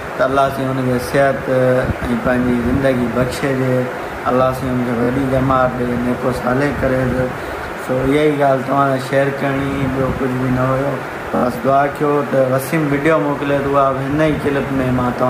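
Repeated frames stutter the audio at 5.02 s and 11.35 s. A 23.2 ms block replays twice, then three times extra. That fits one compressed frame being resent.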